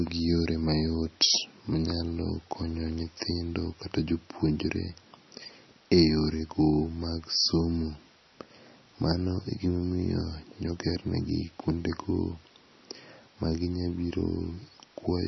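Throughout the speech, nothing is heard above 5.9 kHz, and the sound is watery and swirly with smeared consonant onsets. This is likely heavy MP3 compression, pointing to a very low bitrate near 26 kbps, where the encoder cuts the treble and drops weak frequency lines.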